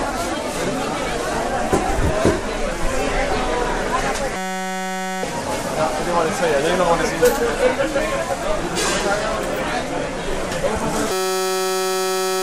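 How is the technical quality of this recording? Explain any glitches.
The recording has two serious glitches. A system hang loop at 4.36–5.23 s and again from 11.12 s to the end replays a 5.33 ms slice, fitting a 256-sample buffer, as a steady 188 Hz buzz, losing about a second and a second and a half of audio.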